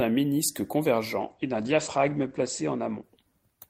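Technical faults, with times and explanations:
1.21–3.69 s, call bitrate drop: the encoder's rate fell from 48 to 12 kbps and bandwidth narrowed from 20 to 8 kHz, leaving speech coarse and muffled to the end.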